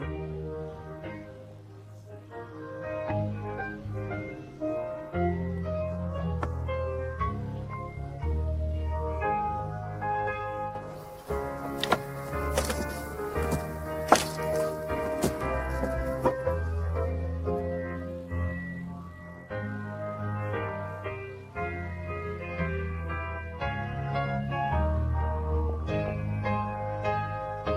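The audio has DAB burbling at 7.70–7.74, 9.59–9.88, 13.33–13.50, 20.57–20.79 and 25.69–26.10 s. Each burst brings short blips of noise in single sub-bands. Weak reception let roughly 0.2 to 0.3 percent bit errors slip past error correction, corrupting the MP2 audio data in the frames hit.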